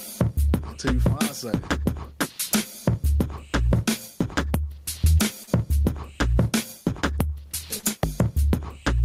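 From start to finish the loud and soft parts sit closer in level and the sound is squashed, a gain pumping effect with a swing of around 20 dB. The likely cause is input gain set far too high with a fast limiter clamping it. On a waveform the envelope looks flattened, with the noise floor rising and falling between peaks.

At 5.43 s and again at 7.79 s, short concealed packet loss leaves a brief smear or wobble. About 40 ms of audio never arrived each time, and roughly 36 ms of it was filled by extending the preceding sound. A spectrogram shows a smooth, repeated stretch of harmonics or noise before a blended join.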